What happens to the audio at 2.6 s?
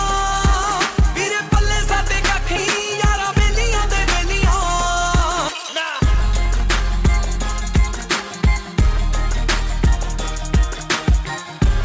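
At 2.56 to 2.58 s playback skips ahead: roughly a second of audio was discarded, most likely by a jitter buffer shedding an overflow of queued packets. Nothing fills the gap, so the sound jumps abruptly forward, with the two sides spliced almost directly together.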